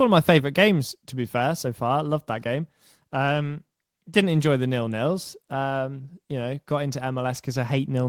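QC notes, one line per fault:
Nothing to flag on this speech recording; no faults turned up anywhere in it.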